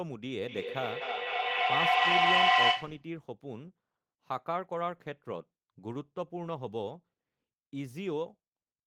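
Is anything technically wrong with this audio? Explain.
Yes. Feedback echo between two devices runs from 0.47 to 3.11 s: a second device in the room replays the call, and the sending device's microphone recaptures it beyond the reach of the local echo canceller. The speech returns about every third of a second, thinner and ringing, building to about 11 dB above the speech.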